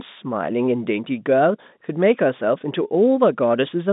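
No technical faults can be heard in the speech, which carries the narrow telephone band of G.711 coding, running from about 150 Hz to 3.7 kHz, with nothing above 3.8 kHz, as the fixed-line format allows.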